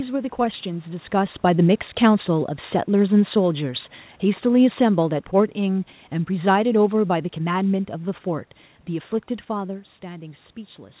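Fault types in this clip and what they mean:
Automatic gain falling: The gain control judged the input too loud or its background noise too strong and turned itself down gradually. From 4.24 s to 7.83 s the speech sinks by about 5 dB. The room background drops along with it, showing the change comes from the system.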